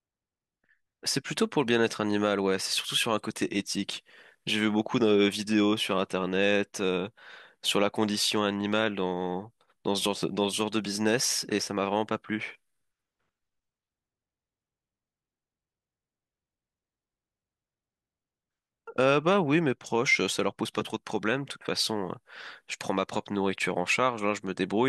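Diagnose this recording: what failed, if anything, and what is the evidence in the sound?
Nothing failed in this recording, and there is no evidence in the sound of any fault.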